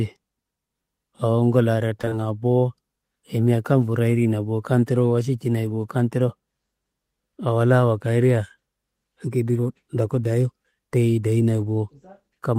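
At 2.01, 2.05 and 2.09 s, three short concealed packet losses arrive back to back, each a 20 ms stretch of the speech that reached the decoder too late. The receiver patched each hole by extending the preceding sound, so across about 2.01 to 2.13 s the speech smears and wobbles briefly. Unlike a plain dropout, there is no silent gap. The missing audio is papered over with continued sound before blending back.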